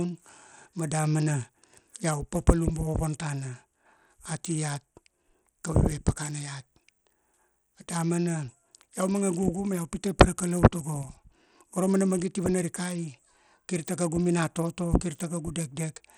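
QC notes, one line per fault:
Throughout, Bluetooth SBC compression: the speech was likely squeezed through a starved SBC link, fitting an 80 kbps stream, so the upper sub-bands get few bits and the rest are coarsely quantised, leaving dull, flickering treble with plainly audible gritty noise and aliasing.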